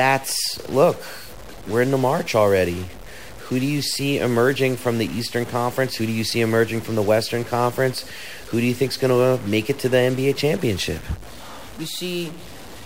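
Throughout the speech, a likely stuck bit offsets many samples by about -35 dBFS, giving harsh buzz, hissy pauses, broadband spectrogram haze and a stepped waveform.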